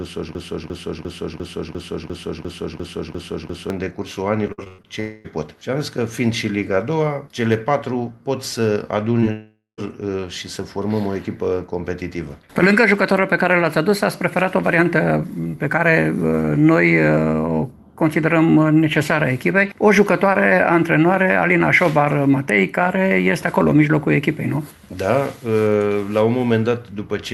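The audio opens already caught in a broken-record loop. From 0 to 3.70 s, a fragment of about 0.35 s repeats exactly, back to back, about ten times, likely because the player or stream stalled on its last piece. Repeated packet loss follows from 4.47 to 4.86 s. Five gaps, the longest about 0.11 s, are patched by stretching the last sound, so roughly half of that span turns choppy and robotic. There are two long network dropouts. From 5.00 to 5.26 s the audio is replaced by a fading continuation of the last sound. From 9.32 to 9.80 s the continuation fades into about 0.14 s of silence, likely from arrivals stopping entirely, and the lost audio never returns. Just before that, at 9.20 to 9.24 s, a short concealed packet loss fills about 20 ms with a continuation and leaves a brief smear. At 22.49 s a sharp snap sits on top of the sound. This is an electrical switching spike, likely from a nearby switch or discharge arcing into the line.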